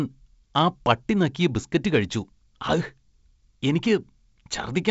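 Nothing here counts as a fault: the speech comes across the way G.722 wideband telephone coding at 56 kbit/s normally leaves it, with the light coding hiss that goes with it and the usual ceiling at around 7.7 kHz.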